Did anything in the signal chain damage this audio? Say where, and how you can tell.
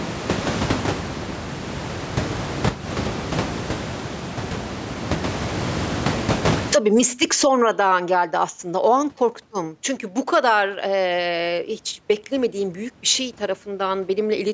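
Yes. Gain pumping runs through the whole speech clip. The gain swings roughly 35 dB. The likely cause is microphone gain set far too high, with a fast limiter in the call processing clamping every peak.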